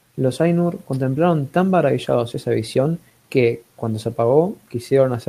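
Clock drift between sender and receiver runs through the whole recording: the sender's clock is roughly 4 percent fast, so the receiver's buffer keeps overfilling. Repeated timing corrections follow from 0.21 s to 5.26 s, where the receiver trims small slices of speech to keep pace.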